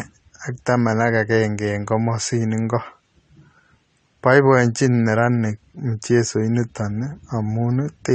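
Throughout the speech, the audio was likely squeezed through AAC compression at a low rate, fitting an AAC-LC stream around 32 kbps, so its quantisation discards detail the hearing model deems inaudible. The damage is plainly audible: the speech sounds dull and smeared, with a warbling, fizzy texture.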